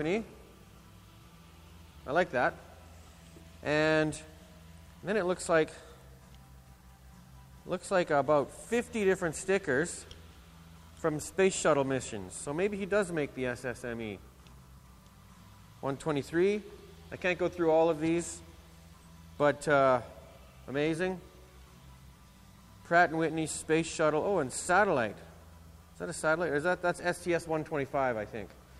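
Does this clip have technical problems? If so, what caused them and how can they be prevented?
No, nothing stood out as a technical problem on listening, so there is nothing here that calls for prevention.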